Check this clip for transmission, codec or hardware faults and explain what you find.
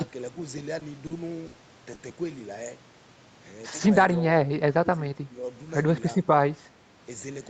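Four transmission faults are audible in this speech, all in the call path: two short stalls, one burst of packet loss and a stretch of suppressed speech. The spectrum stops at 8 kHz throughout, as the call codec's bandwidth would give.

Short stalls from a late packet occur at 0.79–0.99 s and 1.07–1.14 s. The jitter buffer ran dry, so the receiver stretched the last sound by about 20 ms and then 40 ms before resuming where it left off. Each sounds like a briefly held sound. A spectrogram shows smeared, flat harmonics with nothing lost.

A burst of packet loss at 1.47–1.56 s removes 60 ms of audio. The receiver extended the previous sound and faded it, then jumped ahead. It is heard as a fading held sound followed by a skip. The waveform shows a decaying, repetitive stretch, then an abrupt resumption.

Speech suppressed in double talk occurs between 4.71 and 5.43 s. The talker dips by up to about 15 dB, for around 0.4 s in total, likely because the echo canceller mistook simultaneous talk for echo. 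The waveform envelope dips there.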